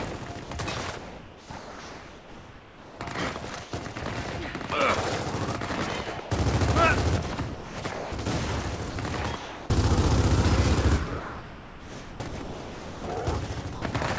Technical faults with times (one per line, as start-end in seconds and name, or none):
0.44-3.96 sound chopped by the voice detector
6.20-6.30 sound dropped by the voice detector
7.54-8.12 sound chopped by the voice detector
8.90-9.70 sound chopped by the voice detector
11.20-13.04 sound chopped by the voice detector
13.74-13.82 sound dropped by the voice detector